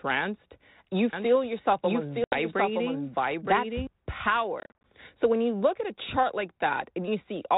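Speech recorded through a G.726 ADPCM path, band-limited below 4 kHz with light coding noise, carries a doubled audio track from 1.13 to 3.87 s. A full-band second copy, about 5 dB quieter, trails the original by roughly a second, with no decay or room colour, and starts and stops abruptly. This is likely a second capture through a slower path or an edit holding two copies out of step. Packet loss on an ADPCM call opens a hard-edged hole of about 80 ms between 2.24 and 2.37 s. A second, worse loss runs from 4.60 to 4.84 s, where 150 ms goes missing in gaps scattered over 240 ms, the longest about 40 ms. After each gap the decoder's adaptive predictor and step size no longer match the sender's, so the speech comes back slightly distorted before settling within a few tens of milliseconds.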